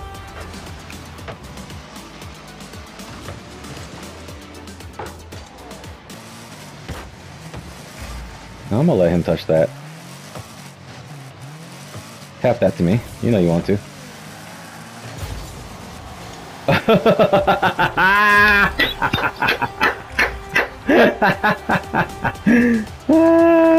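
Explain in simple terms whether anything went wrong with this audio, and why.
Nothing went wrong with the signal: no technical faults can be heard anywhere in the recording.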